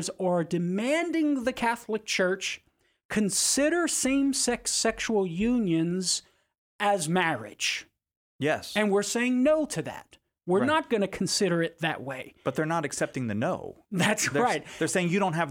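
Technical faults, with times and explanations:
Nothing technical stands out here; the speech comes across without any faults worth noting.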